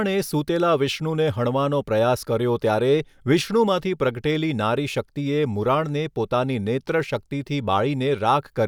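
No technical faults occur at any point in the speech, so there is nothing to describe in time order.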